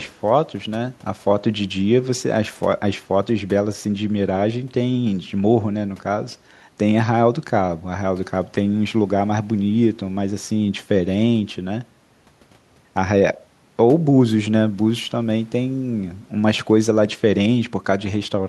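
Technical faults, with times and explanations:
Nothing technical stands out here, and the speech comes across without any problems worth flagging.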